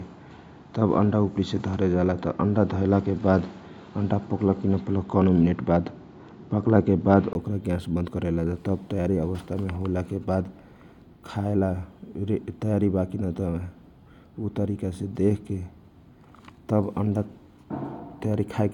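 From 0.0 to 7.35 s the speech is band-limited, with nothing above 7.6 kHz, a level about 5 dB different and a faint noise floor. A 20 ms gap at 7.35 s precedes fuller sound, likely an input switched to a poorer device and back.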